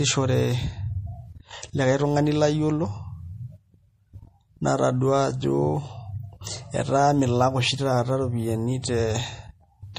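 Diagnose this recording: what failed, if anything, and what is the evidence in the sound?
The codec stage failed. Across the whole speech recording, nothing reaches above 15.1 kHz, and the damage is plainly audible throughout. The hard treble ceiling and the level of damage fit a low bitrate of about 40 kbps. The likely cause is MP3 compression. Starved of bits, the encoder drops everything above a fixed frequency. It also discards weak spectral lines that flicker between frames. That leaves a watery, swirling texture and smeared attacks.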